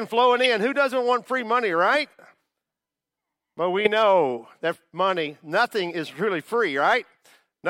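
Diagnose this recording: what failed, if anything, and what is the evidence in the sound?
Codec stage: corrupt frame decoded, twice. Loud chirpy bursts at 0.39–0.46 s and 3.85–3.87 s, where damaged frames got played with misread gains and codes.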